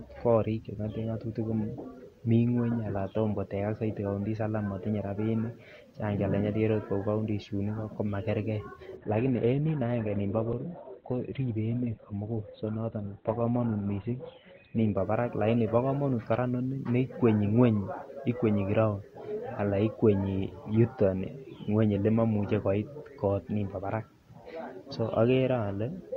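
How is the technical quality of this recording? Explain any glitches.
The speech has one quality dip. Adaptive stream at a lower bitrate from 8.97 to 14.97 s, after "counties chuun ikoo komakerke" and until "barak lakini bo komonut": the stream switched to a much leaner encoding, consistent with Opus dropping from 64 to 12 kbit/s. Nothing above 4.3 kHz remains, so the speech turns abruptly dull and artefact-laden, with no gap.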